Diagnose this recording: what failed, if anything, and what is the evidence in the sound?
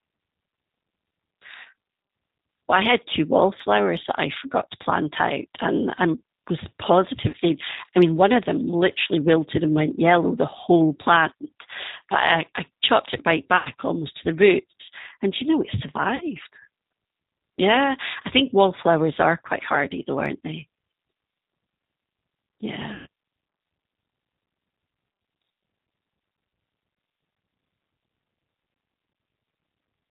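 Codec stage. G.729 coding runs throughout. Nothing above 4 kHz survives, and the speech sounds plainly rough and synthetic. That fits 8 kbit/s G.729A rebuilding speech from a filter and a few pulses.

Network stage. VoIP packet loss concealed by the speech codec occurs at 1.61–1.67, 7.29–7.35, 13.57–13.68, 16.16–16.23 and 22.94–23.07 s. The decoder stretches the last frame into a fading buzz or coloured noise, covering gaps of 40 to 120 ms.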